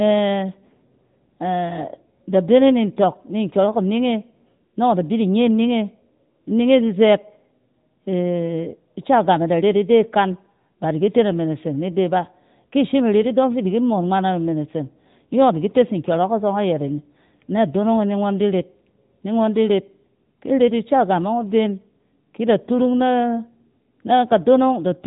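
From start to finish, the speech carries the sound of the AMR narrowband mobile codec. The audio was squeezed through an 8 kHz phone channel, so nothing above about 3.8 kHz survives. Sibilants lose their edge and the voice sounds boxed in. The codec rebuilds speech from a vocal-tract model fed by sparse pulses, and here that damage is plainly audible as a buzzy, synthetic tone. The level of coding loss fits a 10.2 kbps mode.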